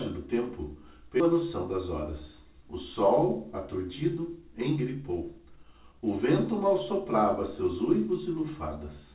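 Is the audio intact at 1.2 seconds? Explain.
No, a skip ahead at 1.20 to 1.22 s drops about 0.4 s of audio, so playback jumps forward and the two sides join almost seamlessly.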